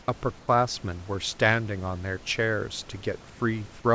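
From 0.40 to 0.48 s and again from 3.30 to 3.40 s, the room background gives way to comfort noise in place of the background, likely from discontinuous transmission filling pauses with synthetic noise. The first gap drops about 8 dB, the second about 3 dB. On a spectrogram both show smooth, textureless bands.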